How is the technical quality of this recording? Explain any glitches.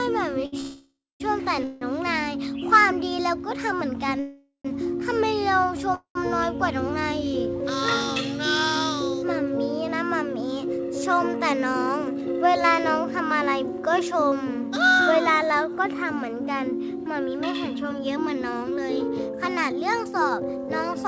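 The recording is marred by network-timing glitches: a brief stall, four freezes and two stretches of speed-up, all heard over band-limited audio that stops at 8 kHz, which fits a G.722 call codec at 64 kbps.

At 0.46 to 0.54 s there is a short stall from a late packet. One packet missed its playout time, the jitter buffer emptied, and the receiver held the last sound for 64 ms until the packet turned up, then resumed from the same point. It comes across as a momentary sustain with a faint buzz or dip. What separates it from the freezes that follow is its brevity: nothing decays into silence.

Call audio freezes occur at 0.60 to 1.22 s (596 ms), 1.64 to 1.83 s (173 ms), 4.20 to 4.67 s (449 ms) and 5.95 to 6.17 s (207 ms). Packets were likely delayed in transit, draining the buffer, so the receiver extended the last sound as a fading buzz or hiss. In the first, third and fourth freezes this fades to silence for about 210 ms, 80 ms and 90 ms respectively. 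Afterwards the audio picks up where it stopped, so a pause has been inserted rather than material lost.

Jitter buffer speed-up follows the freezes, at 11.39 to 12.23 s and 16.98 to 21.04 s. The buffer had built up surplus delay, and the receiver trimmed it by cutting many tiny pitch-period slices: about 70 ms in the first stretch and roughly 300 ms in the second. Playback runs at 107% and 108%, sounding slightly hurried, yet the pitch stays unchanged, which is what distinguishes it from a simple faster playback rate.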